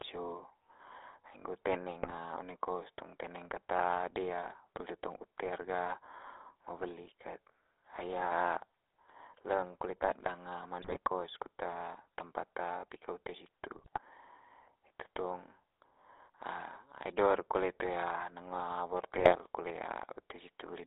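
Speech passed through the GSM full-rate codec, which rebuilds the vocal tract from a coarse model and pulsed excitation at a rate that fits 13 kbps. The sound is confined to roughly 300 Hz to 3.7 kHz and carries a plainly audible buzzy, gravelly roughness. GSM bit errors corrupt the decoder's filter, pitch and gain values on a weak link, so short bursts break into squawks, pops and gargling: at 2.02–2.13 s just before "one kos tong teneng", at 10.82–10.98 s just before "kos kut tempat pika", at 13.75–13.99 s just after "tempat pika ute situ", and at 19.14–19.36 s.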